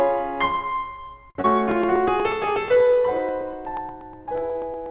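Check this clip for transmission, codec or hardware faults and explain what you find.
Three separate faults show up in this music, all from 1.3 s onward, on top of a call path that's running G.711 mu-law and so has nothing above 4 kHz.

First, at 1.30 to 1.37 s there's a short stall from a late packet. A packet showed up late, the jitter buffer ran dry, and the receiver held the last bit of sound for about 52 ms until the data arrived, then carried on exactly where it left off. Nothing's actually lost, but you hear the music hang for a moment with a faint buzzy or slightly dipped quality, and everything after it lands 52 ms later than it should.

Right after that, at 1.41 to 1.46 s, comes a short concealed packet loss. This time about 20 ms of audio really never made it to the decoder, so the receiver papered over the gap with roughly 25 ms of invented continuation, extending the pitch of what was playing or shaping noise if there wasn't one, and then crossfading back into real audio. 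It comes across as a quick smear or wobble.

Then from 1.71 s to the very end there are periodic USB or driver dropouts, evenly spaced every 0.121 s. Something in the background is likely blocking the USB bus or audio driver on a fixed timer, and each time a sliver of audio gets skipped outright rather than replaced. The result is a steady, metronome-like train of tiny ticks or pops in the music, audible only while there's sound playing.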